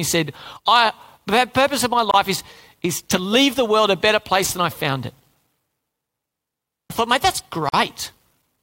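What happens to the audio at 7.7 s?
A gap at a join of encoded pieces opens from 7.69 to 7.73 s, right after "I thought mate that's". Two separately encoded pieces were joined untrimmed, leaving about 45 ms of silence. The speech cuts off abruptly, then resumes where it stopped.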